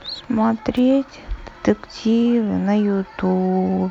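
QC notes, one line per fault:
0.77–0.79 s, electrical switching spike: a nearby switch, motor or static discharge likely arced and the audio line picked up the burst. It adds a sharp snap, peaking at roughly -20 dBFS, that sits on top of the speech for about 20 ms.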